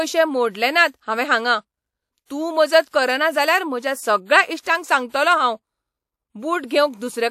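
Pre-echo smears four speech onsets: 2.25–2.30 s before "तूं मजत करना जाल्यार", 2.89–2.93 s before "करना जाल्यार म्हज्या सगळ्या", 4.61–4.66 s, and 6.66–6.70 s. The codec spread block noise ahead of each attack, so a 41–56 ms hiss leads the onset rather than trailing it as reverb would.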